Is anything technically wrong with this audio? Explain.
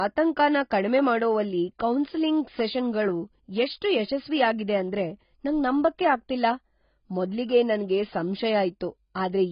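Yes. AAC compression is audible across the whole speech clip. Nothing in the spectrum survives above about 5.1 kHz, so the sound is dull and muffled, with a smeared, warbling texture on sustained vowels and a fizzy, broken quality on sibilants. The cause is likely heavy AAC-LC coding at a very low bitrate, around 16 kbps. At that rate the encoder lowers its cut-off, leaves gaps in the spectrum and fills some bands with substitute noise.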